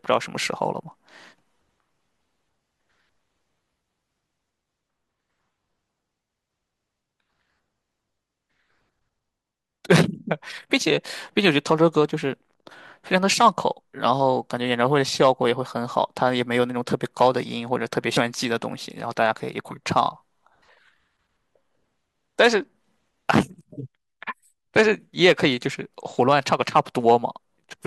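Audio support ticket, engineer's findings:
Compressed frames skipped at 18.16 s and 20.68 s: speech jumps ahead about 70 ms, consistent with three dropped 24 ms frames at the decoder.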